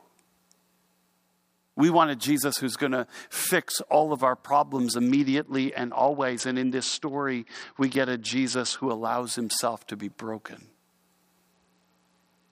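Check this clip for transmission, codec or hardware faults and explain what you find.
Two stretches of Bluetooth SBC bit pool drop, from 5.07 to 8.91 s and from 11.52 s to the end. The link squeezed the encoder's bit budget, so the top sub-bands starve and the rest get coarse, leaving the speech dull and gritty, which points to a bit pool near 8 at roughly 66 kbps.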